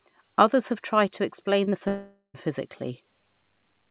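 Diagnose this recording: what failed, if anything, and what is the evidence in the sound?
Short concealed packet loss at 1.64 to 1.68 s and again at 1.70 to 1.74 s, a network-stage fault. Each gap lasts 20 ms, and the receiver bridged it by extending the preceding speech, leaving two brief smears or wobbles before the audio blends back in.

Long network dropout from 1.88 to 2.36 s. The speech is continued for about 0.46 s as a fading buzz that decays into roughly 120 ms of silence before real audio resumes, with that stretch missing. The likely cause is a network outage, on a path band-limited to 4 kHz, which fits G.711 A-law.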